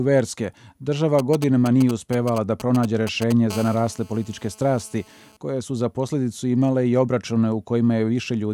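From 1.19 to 3.32 s, GSM signalling bursts break in: a nearby 2G phone's intermittent radio bursts are rectified into galloping ticks and short 217 Hz buzzes, fairly loud. From 3.50 to 5.37 s, a GSM phone buzz follows, with continuous call transmission giving a steady, raspy 217 Hz buzz about 22 dB below the signal, unbroken rather than grouped.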